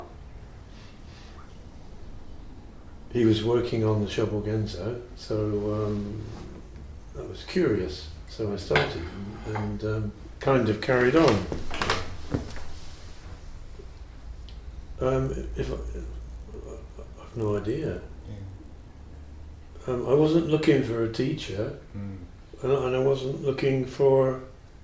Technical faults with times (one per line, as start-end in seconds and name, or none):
15.22-18.98 resampler restarted on every block